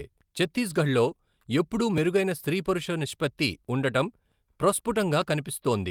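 No technical faults can be heard anywhere in the recording, and the signal stays intact throughout.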